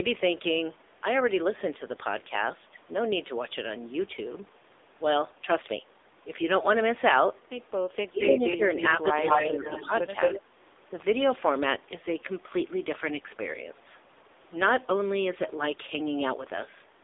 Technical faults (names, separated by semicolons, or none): AMR narrowband mobile codec; speech suppressed in double talk